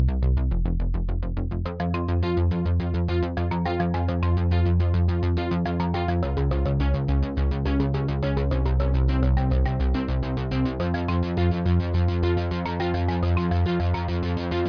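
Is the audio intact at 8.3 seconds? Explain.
Yes, the audio is intact at 8.3 seconds, with no dropout, click, distortion or other fault at that moment.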